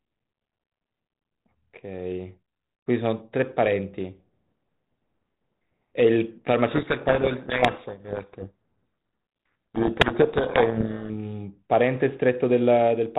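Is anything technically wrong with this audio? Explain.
Yes. From 6.68 to 11.10 s there is a codec payload misread. The sending and receiving ends disagree on the bit order of the G.726 code words. Most decoded difference values are therefore wrong, and the adaptive prediction drifts. The speech is buried in harsh distortion. The rest of the clip carries only light band-limited coding damage from the G.726 coding, which fits 32 kbit/s.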